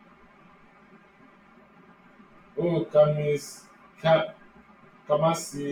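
One channel arrives roughly 5 ms late and is summed with the other, causing channel delay (comb filtering) for the whole clip. Shared speech cancels at evenly spaced frequencies from around 100 Hz upward, leaving a hollow, phasey tone.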